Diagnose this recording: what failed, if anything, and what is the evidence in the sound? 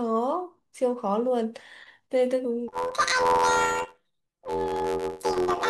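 The fault is planar audio read as interleaved, at the sample-format conversion stage, from 2.68 s to the end. The speech turns into a robotic buzz at about 86 Hz, matching a block of roughly 11.6 ms, which fits 512-sample planar blocks. Each block's left half and right half play back to back at double speed. Because the blocks are short, there is no clear octave jump, and the pace stays correct. That rules out a simple sample-rate mismatch.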